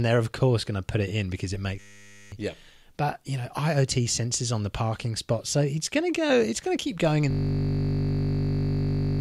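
A system hang loop strikes twice: the driver froze while hardware kept replaying one ring buffer. After "it in because it", 1.8–2.32 s, a 10 ms loop buzzes at 100 Hz, losing about half a second; after "to keep going in", from 7.31 s to the end, a 20 ms loop drones at 50 Hz.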